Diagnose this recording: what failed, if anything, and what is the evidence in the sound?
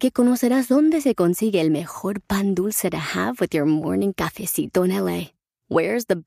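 No fault found in this recording.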